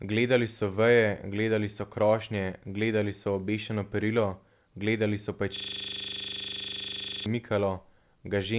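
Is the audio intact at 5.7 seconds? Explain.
No. At 5.7 s the audio is caught in a system hang loop that runs from 5.56 to 7.26 s, starting just after "gledali so". The machine stalled while the sound hardware kept replaying one 40 ms slice of its buffer, some forty times over, giving a rigid buzzing rattle at 25 Hz. Unlike a call's packet-loss concealment, which fades and varies its stand-in sound, these repeats are identical and never decay.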